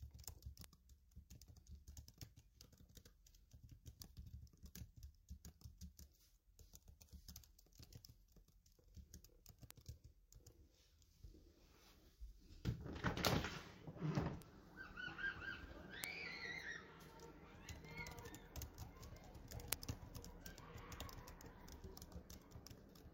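Five bit error spikes tick sharply at 0.64, 9.71, 14.42, 16.04 and 19.73 s. Each is a flipped bit jumping one or two samples, peaking near -31 to -7 dBFS.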